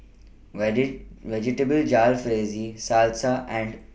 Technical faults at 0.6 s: none

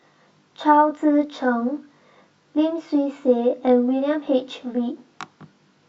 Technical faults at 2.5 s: channel delay (comb filtering)

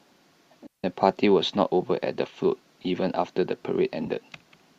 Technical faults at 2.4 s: none

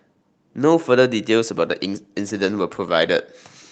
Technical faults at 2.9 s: call bitrate drop

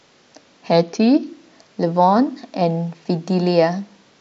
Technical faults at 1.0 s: drift correction step

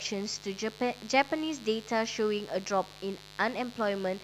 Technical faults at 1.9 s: mains buzz

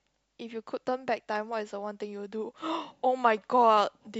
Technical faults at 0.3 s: clock slip clicks

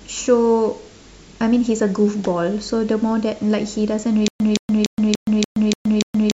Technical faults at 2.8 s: none

